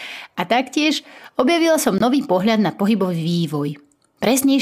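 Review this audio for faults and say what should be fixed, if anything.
Damaged bits in one compressed frame caused the decoder to reject it, and the player inserted silence in its place. This is a corrupt frame muted. From 1.98 to 2.01 s the speech cuts out abruptly for about 30 ms, which points to a single lost frame. Timing stays intact. Error protection on the transport, or packet-loss concealment in the player, would fill that gap with a plausible estimate instead of silence.

At 3.34 s a frame with flipped bits was decoded anyway. Misread gain and spectral codes put energy at the wrong frequencies, giving a corrupt frame decoded. It is heard as a brief burst of misplaced energy lasting about one frame and peaking at about -15 dBFS. Checksum validation before decoding would catch such frames so they are concealed rather than played.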